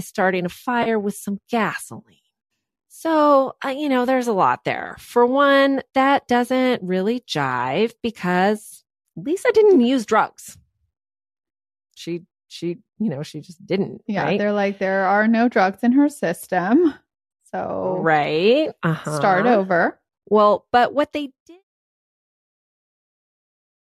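At 0.83 to 0.88 s, just before "with some", there is a brief AAC frame loss with concealment. About 30 ms of the coded stream went missing, which fits three lost frames, and the decoder patched the hole by repeating the last good spectrum with randomised phase. It sounds like a short smeared, noisy blur. On a spectrogram the harmonics flatten into a vertical smudge of diffuse energy, while the waveform shows a short stretch of noise-like, unstructured texture instead of a gap.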